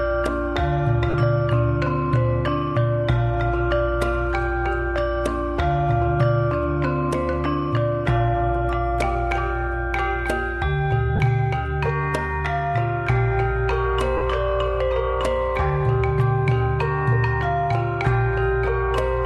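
Lost LE Audio frames occur at 1.10 s, 11.16 s and 14.17 s, with gaps of about 37.5 ms, 30 ms and 37.5 ms, which fits runs of four or five 7.5 ms LC3 frames. For each missing stretch the decoder conceals the gap by repeating the last good spectrum with randomised signs, then fading it. The result is a brief noisy smear in place of the sound.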